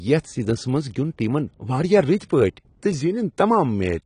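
From start to finish the speech sounds dull and smeared, with a fizzy, warbling edge on sibilants, likely from AAC compression at a low bitrate, something near 32 kbps. A spectrogram shows a hard ceiling at 10.1 kHz.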